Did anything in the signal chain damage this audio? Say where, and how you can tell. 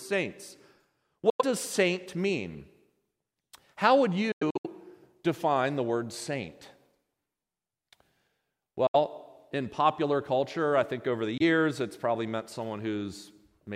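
Yes. The wireless playback link most likely dropped packets on the way to the headphones, a Bluetooth dropout. The speech cuts to silence and resumes as if it had kept running: 1.30–1.42 s before "does saint mean", 4.32–4.67 s as broken gaps (longest 93 ms), 8.87–8.96 s before "in popular culture I", and 11.38–11.42 s between "I think over the" and "it's probably meant". Gaps come in steps near 23 ms, which fits whole lost codec frames.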